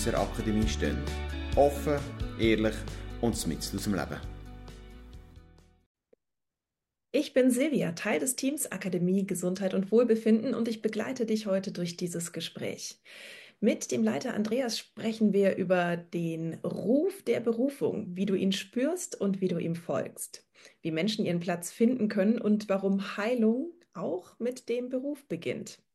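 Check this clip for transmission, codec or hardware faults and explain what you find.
There's one fault: a single click at 18.26 s, and it's most likely dropped samples. Just a handful of samples, something like a tenth of a millisecond, seem to have gone missing from the stream, so the waveform leaps straight from one value to a later one instead of moving smoothly between them. That gap is far too brief to take out any actual sound. What you get is one sharp tick, a thin vertical line through the spectrum.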